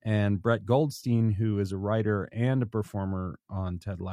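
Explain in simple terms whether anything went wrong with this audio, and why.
Nothing went wrong that I could hear; listening to the speech, nothing stood out as a problem.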